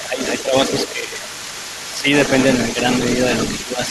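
A speech clip with a second voice running underneath the talker for its whole length, sitting roughly 10 dB below the main speech. This is other side's voice leaking through, most likely because the far end's loudspeaker output reached the microphone and the echo canceller left part of it in place. Unlike an unrelated background talker, this voice is a residue of the conversation partner being played back into the room. Over that bed, the talker's own voice repeatedly sags: briefly at 0.07 to 0.2 s and 0.43 to 0.54 s, for a longer stretch at 0.93 to 1.31 s, again briefly at 1.94 to 2.06 s, and from 3.65 s to the end. The shallower dips are a few dB and the deeper ones, at 0.93 and 1.94 s, reach around 10 dB. That pattern fits speech suppressed in double talk, where the canceller, hearing both sides at once, turns the talker down along with the echo. The speech is pulled down in level rather than cut to silence the way a dropout or noise gate would cut it.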